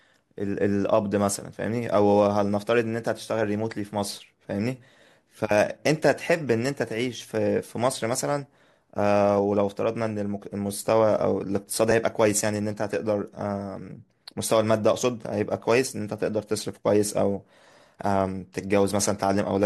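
At 11.90 s the speech jumps forward slightly. The same happens again at 15.02 s. Both are compressed frames skipped. Each time, one whole frame of the coded stream is not played. The frame is either missing or rejected by the decoder as damaged. The frames here are 21.3 ms long, so roughly 20 ms of speech vanishes at each point.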